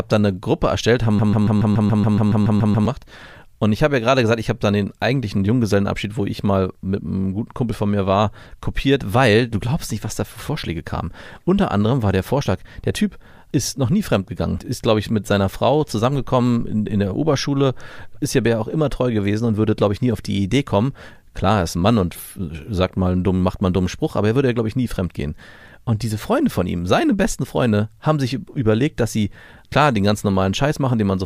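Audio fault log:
1.19–2.86 s, broken-record loop: a 0.14 s fragment of the speech repeats exactly, back to back, 12 times. The sound stutters mechanically instead of moving forward, and the speech that belonged in this stretch is lost. The likely cause is a player, encoder or stream that stalled and kept resending the last fragment it held. On a waveform and spectrogram, the span shows one identical block tiled at a regular 0.14 s period.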